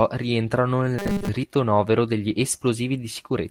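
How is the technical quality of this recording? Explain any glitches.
The recording has three distinct glitches, all in the speech timing and delivery path.

From 0.99 to 1.29 s there is robotic sound from repeated short buffers. The speech becomes a rigid, metallic buzz at 200 Hz. That pitch fits a 5 ms chunk being looped, likely because new audio was arriving too seldom. Unlike a skip, the missing audio is replaced by repetition rather than simply cut.

Between 1.43 and 1.45 s playback skips ahead. About 0.4 s of speech is dropped, and the two sides are butted together with no fill. The result is an abrupt jump in the speech. There is no buzz or change of pace, only missing material.

From 1.57 to 2.59 s comes a jitter buffer speed-up. The receiver trimmed short pitch-period pieces, around a tenth of a second in total, to shrink its backlog. Speech runs at 109% speed and sounds hurried. 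The pitch stays unchanged, which separates this from a sped-up playback rate.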